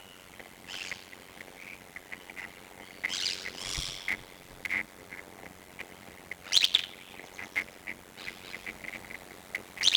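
A block size mismatch (padded) runs throughout: each short block, which fits 256 samples, is zero-filled to a longer read, causing a 91.9 Hz buzz and playback at 0.533 times speed with unchanged timbre. From 8.20 s to the end, a doubled audio track appears, likely from a second, slower capture path, adding an equally loud, uncoloured copy about 150 ms behind that starts abruptly.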